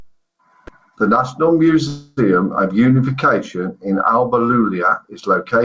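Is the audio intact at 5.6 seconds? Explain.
Yes, the audio is intact at 5.6 seconds, with only the ordinary band limit of a G.722 call path, which leaves nothing above 8 kHz.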